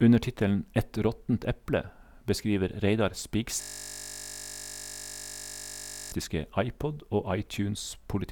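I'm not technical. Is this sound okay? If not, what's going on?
No, there's a problem in the middle. From about 3.61 to 6.12 seconds, the speech gives way to a steady buzz. That's a system hang loop. The computer briefly froze, but the sound hardware kept replaying the last tiny scrap of audio, just 20 milliseconds long, over and over, well over a hundred times. Repeating that fast, 50 times a second, the scrap stops sounding like speech and becomes a flat, even drone until the system recovers.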